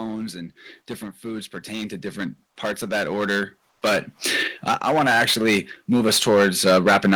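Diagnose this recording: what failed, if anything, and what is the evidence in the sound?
Hard clipping runs through the whole recording, pointing to a converter or sample-format stage driven about 18 dB past its limit. Roughly 7 percent of samples were pushed past that limit and cut flat, so every loud stretch of speech carries a harsh fuzz rather than occasional crackle. On a waveform the peaks are sliced into flat plateaus at both rails. A spectrogram shows dense harmonic energy smeared upward into the top kilohertz bands wherever the speech is loud.

Automatic gain rising, from call processing, appears twice. From 1.21 to 4.13 s the level climbs by about 9 dB, and from 4.81 to 6.3 s by about 4 dB. The control judged the input too quiet and raised gain gradually, so speech and background swell together. The waveform envelope ramps upward across each span, and the spectrogram brightens uniformly, noise floor included, with no single band changing on its own.

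From 3.69 to 3.81 s, a 120 ms pause, the background is replaced by a smoother synthetic noise, only about 1 dB different in level. That background sits about 52 dB below the loudest speech. The likely cause is the codec's discontinuous transmission, as in Opus DTX, where the receiver synthesises comfort noise while the sender falls silent. On a spectrogram the textured background gives way to a smooth, uniform wash, and then the real background returns.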